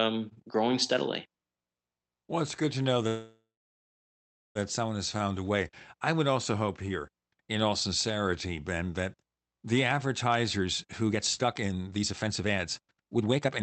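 After "it's good to know", from 3.07 to 4.58 s, the last sound stretches into a fading buzz, then about 1.06 s of silence before "someone has" resumes. This call audio freeze likely comes from delayed packets emptying the jitter buffer, inserting a gap without losing speech. From 10.57 s to the end at 13.62 s, the speech runs hurried at about 135% speed with unchanged pitch. This is a jitter buffer speed-up, in which short pitch-period pieces totalling around a second were cut to reduce delay.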